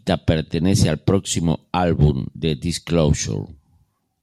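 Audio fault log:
No faults are present in this speech recording. Nothing in it calls for a timed entry.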